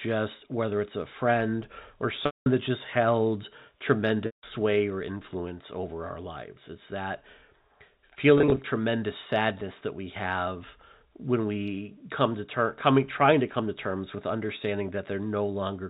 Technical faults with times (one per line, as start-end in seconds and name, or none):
2.26-2.46 packet loss with pitch repetition
4.26-4.43 packet loss with pitch repetition
8.38-8.64 packet loss with pitch repetition